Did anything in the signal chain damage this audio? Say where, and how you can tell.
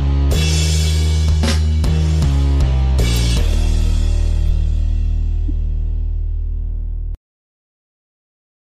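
Yes, at the codec decoder. Brief glitches at 3.17 s, 4.49 to 4.51 s and 5.49 s, peaking around -20 dBFS with the middle one nearer -10 dBFS, are corrupt frames decoded: flipped bits produced wrong gains and codes, putting energy at the wrong frequencies for a few frames.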